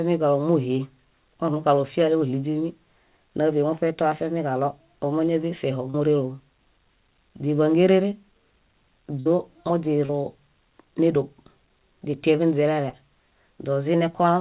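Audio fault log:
5.90–5.96, 10.06–10.11 and 12.89–12.95 s: short concealed packet loss. About 40 ms never arrived and was filled by extending the previous sound, heard as a brief smear rather than a gap.
9.20–9.28 s: burst of packet loss. About 60 ms went missing. The fill is longer and fades as it goes, then the sound resumes further on, skipping what was lost.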